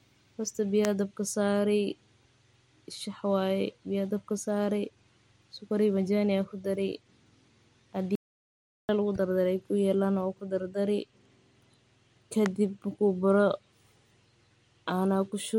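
At 8.15 s the speech cuts to dead silence until 8.89 s. This audio dropout to silence most likely came from lost input, about 0.74 s gone.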